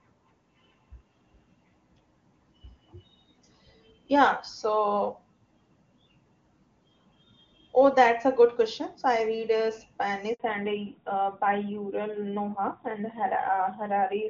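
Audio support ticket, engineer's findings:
Handover gap: audio cuts out abruptly, 10.34–10.40 s, about 60 ms of silence. Network handover; no speech frames delivered while the call switched links.

Fallback to narrowband: from 10.40 s to end, sound turns duller and rougher, nothing above 4 kHz. Codec dropped from HD Voice wideband to narrowband, consistent with AMR-NB 12.2 kbit/s.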